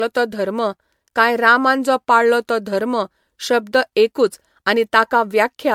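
From start to finish the speech sounds swirly, smeared and hollow, with blurred attacks and nothing above 19.8 kHz, more damage than a single MP3 pass near 100 kbit/s would leave. This is likely generation loss, with the audio re-encoded around seven times.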